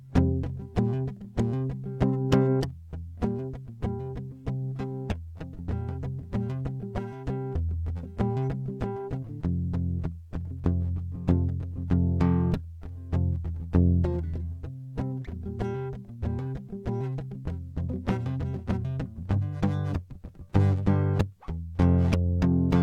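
Nothing is technically wrong with this music clip.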